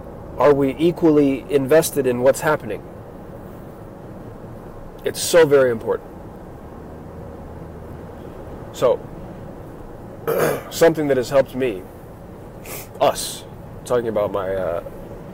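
Hard clipping recurs in seven bursts: 0.41–1.79 s and 2.26–2.54 s (about 6 dB over), 5.34–5.62 s (about 10 dB), 8.84–8.92 s (about 3 dB), 10.82–11.41 s (about 8 dB), 13.02–13.09 s (about 5 dB) and 13.93–13.96 s (about 1 dB). Peaks exceed what the signal path can carry and are sheared flat. The waveform shows squared-off tops, and the spectrogram shows broadband harmonic smear reaching high frequencies.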